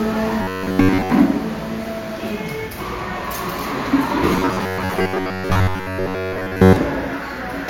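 From 0.42 to 1.10 s the sound turns into a rigid, metallic buzz pitched at 93.8 Hz. The same buzz returns from 4.33 to 6.76 s, at the same pitch. This is robotic sound from repeated short buffers. New audio likely arrived too seldom. The playback filled each gap by looping a stretch of about 10.7 ms, and most of the real audio was skipped. That loop length sets the fixed buzz.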